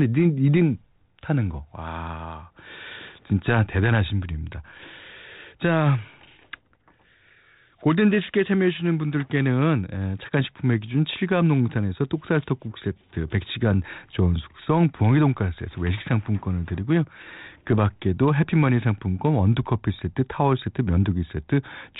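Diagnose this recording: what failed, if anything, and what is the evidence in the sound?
Nothing in the chain has failed: the speech passes through G.726 ADPCM at a rate that fits the 32 kbit/s DECT setting, so it is limited to the telephone band below 4 kHz and carries only the light coding damage expected of that codec at that rate.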